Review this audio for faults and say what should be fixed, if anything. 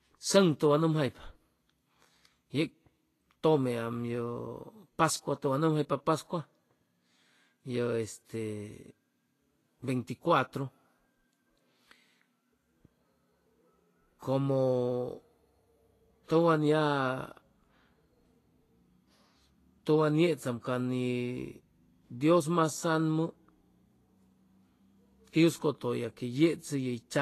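Throughout the speech, treble is hissy and grainy with nothing above 14.2 kHz, likely Vorbis compression at a low bitrate near 32 kbps. Unlike a plain low-pass, detail below the cut-off turns to noise. Re-encode from the source at a higher Vorbis quality setting.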